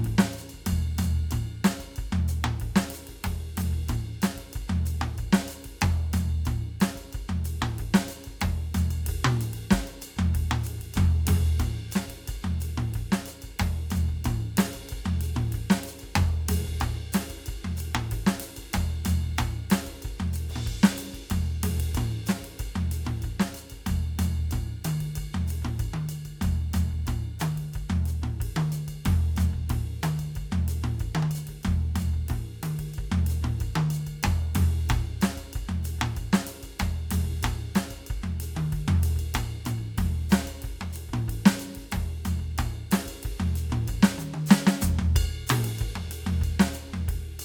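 Nothing technical goes wrong anywhere in this music, so there's no fault to point to.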